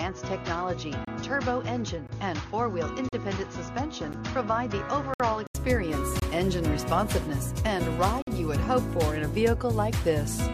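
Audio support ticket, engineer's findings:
Input switched to a poorer device, 0 to 5.55 s: dull, boxy sound, nothing above 6.7 kHz, level about 5 dB down, fresh noise floor roughly 45 dB under the signal. About 80 ms of silence at 5.55 s, then it opens up and clears. Likely an input device change mid-recording, something like a headset's call profile handing over to the proper mic. The narrow band and different floor belong to the weaker device.

Gaps between stream segments: short hard-edged holes of silence, lined up on roughly 1 s segment boundaries. 1.05 to 1.08 s (27 ms), 2.07 s (17 ms), 3.09 to 3.13 s (39 ms), 4.13 s (14 ms), 5.14 to 5.20 s (60 ms), 6.20 to 6.22 s (24 ms), 8.22 to 8.27 s (51 ms). Segment timestamps aren't butting up, so the player pads with silence. Nothing's actually missing, it's just time added.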